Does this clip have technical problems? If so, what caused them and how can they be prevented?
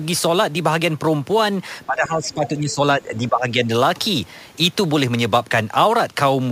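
Yes. The speech is suppressed in double talk from 1.86 to 2.81 s and again from 2.97 to 3.70 s. The level dips by up to about 15 dB for roughly a second and then for about 0.7 s. The likely cause is an echo canceller that could not tell the local talker from loudspeaker echo while both sides spoke, so it attenuated everything. On a waveform the envelope visibly shrinks, and on a spectrogram the upper harmonics fade or break into gaps. Using a better echo canceller with proper double-talk detection, or a headset, prevents this.

The other side's voice is also leaking through at 2.23–2.48 s, about 15 dB below the main speech, and briefly at 2.70–2.74 s, about 25 dB below. This is likely loudspeaker sound reaching the microphone that the canceller failed to remove. A spectrogram shows faint, separate harmonic traces that don't line up with the talker's, and the waveform shows small bursts inside the suppressed stretch. 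Using headphones or lowering the loudspeaker volume would stop it.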